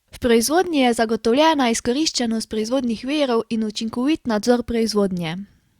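Between 0.48 and 1.03 s the speech carries four small, evenly spaced ticks, each a tiny click or momentary gap lasting around a millisecond at most. These are CD scratch ticks. A scratch on the disc passes under the laser once per revolution, destroying more data each time than the error correction can rebuild, so the player patches or mutes those samples. That explains the regular spacing, tied to the disc's rotation.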